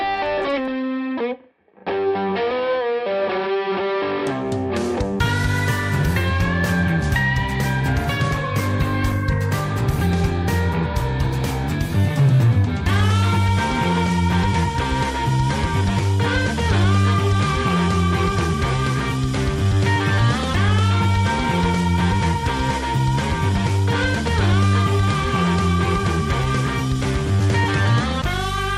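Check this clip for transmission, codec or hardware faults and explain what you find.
Nothing here points to trouble in the transmission, the codec or the hardware, so there's no fault to report.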